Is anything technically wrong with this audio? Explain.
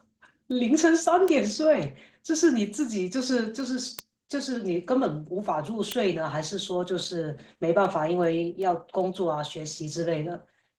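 Yes, two things. Opus voice compression runs throughout: SILK plus a thin CELT layer up top, with coarse excitation, so the speech sounds hoarse and a bit robotic, consistent with roughly 16 kbps. Word clock ticks run from 0.13 s to 10.56 s: an unlocked receiving clock drifting by about 50 ppm slips one sample every 0.4 s or so, giving around thirty sharp, uneven ticks.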